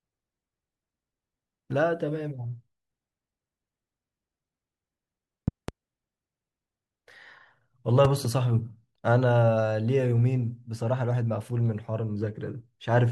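A sharp double pop cuts through the speech from 5.48 to 5.71 s, peaking about 15 dB above it, and a second, softer pair from 8.05 to 8.27 s, about 10 dB up. Each loud pop is likely a voltage step or spike from a plug, switch or static, layered over the continuing speech.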